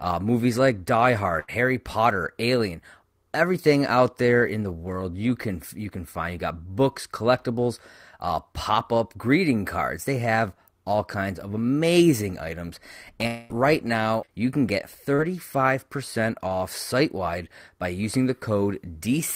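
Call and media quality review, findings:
Burst of packet loss, 1.39 to 1.64 s: about 80 ms of speech missing, concealed with roughly 86 ms of extrapolated audio. Jitter buffer/decoder continues the last sound as a fading buzz or hiss, then playback resumes further along, skipping the lost stretch.

Long network dropout, 13.27 to 13.52 s: roughly 220 ms of speech absent, bridged by about 224 ms of continued, decaying sound with no fall to silence. Likely a network outage upstream; the decoder extends the last frame until real packets return.

Short concealed packet loss, 14.26 to 14.31 s and 15.15 to 15.20 s: gaps of about 20 ms and 40 ms patched by the decoder's concealment, which continues pitch or shaped noise before crossfading back. Audible as brief smears or wobbles.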